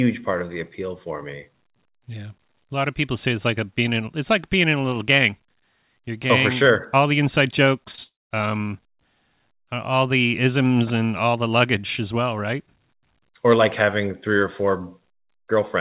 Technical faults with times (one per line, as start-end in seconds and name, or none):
7.92-7.99 short concealed packet loss
8.03-8.32 long network dropout